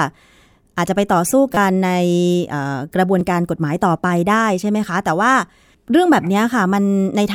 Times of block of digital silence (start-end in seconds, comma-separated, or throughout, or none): none